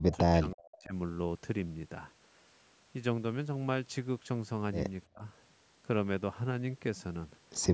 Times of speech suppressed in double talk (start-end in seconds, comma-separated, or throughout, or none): 0.00-0.94, 5.12-5.24